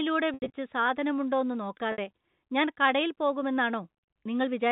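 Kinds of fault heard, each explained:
Packet loss with pitch repetition: chunks of the telephone-band speech stream went missing, and the receiver filled each gap by looping the last pitch cycle. About 120 ms vanished between 0.34 and 0.50 s, with the longest run near 80 ms, and 60 ms more at 1.92 s. These come out as brief buzzy, held tones that fade. On a waveform they are identical repeating cycles shrinking in amplitude. A spectrogram shows frozen, evenly spaced harmonic lines below 4 kHz.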